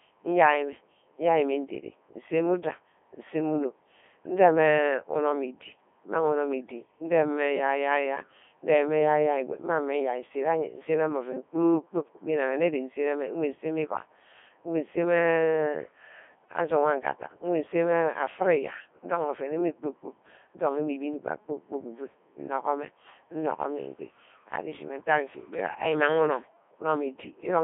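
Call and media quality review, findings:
Codec 2 vocoder across the whole clip: speech reduced to pitch, voicing, energy and envelope, then rebuilt from sine waves, which fits the 3.2 kbit/s mode. Heavy damage, robotic, buzzy timbre, narrowband 250 Hz to 3.5 kHz, nothing above 3.7 kHz.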